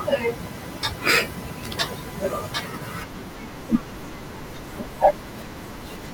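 At 2.50 s the speech jumps forward: compressed frames were skipped, so about a fifth of a second of audio never plays, roughly ten frames' worth, with a frame length near 26 ms. Unlike a dropout, there is no silent gap. Time simply lurches ahead, and the speech resumes mid-stream with a piece missing.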